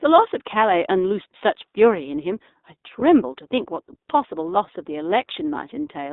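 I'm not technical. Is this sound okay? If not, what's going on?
No. The speech was carried by the iLBC codec, a narrowband phone-call system that squeezes the voice into 20 ms chunks and keeps only a slice of the pitch range, roughly 250 Hz up to 3.7 kHz. The squeezing is plainly audible. The voice sounds thin, like an ordinary phone line, and slightly rough and synthetic, with no deep body or crisp high detail.

There is also a moment of lost iLBC frames. At about 3.00 to 3.03 s, a piece of the stream never arrived. The gap lasted 20 ms, which fits a single lost frame. The decoder covered it by repeating the last bit of voice mixed with a little noise. That brief instant sounds like a tiny held, buzzy smear. Because each chunk stands on its own, the voice snaps straight back afterwards.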